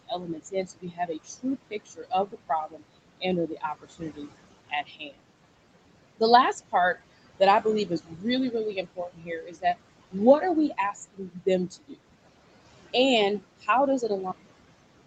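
Noise suppressor artifacts run through the whole clip. The suppressor pulls what it judges to be steady noise down by about 21 dB frame by frame, so the background sinks in pauses and swells back under speech.

Speech cut by the noise suppressor occurs five times, at 0.08 to 2.82 s, 3.2 to 4.3 s, 4.7 to 5.21 s, 7.39 to 9.64 s (just after "last part"), and 10.11 to 11.96 s. The suppressor mistakes soft parts of the speech for noise and turns them down with the background, by about 16 to 21 dB at the deepest. Roughly a second of material is affected in the first and fourth spans, and about half a second or less in each of the others, where consonants and endings sound swallowed or faint.

A cut-off end arrives at 14.32 s. The final buffers never reached the output, so the audio stops mid-sound and drops straight to digital silence with no natural decay, and that silence fills the remaining stretch.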